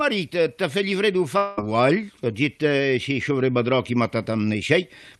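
From 1.37 to 1.59 s the sound turns into a fading synthetic buzz, likely a long network dropout. About 0.2 s never arrived, and the receiver filled it by extending the last sound. A spectrogram shows smeared, repeating bands decaying until the audio resumes, with no silent gap.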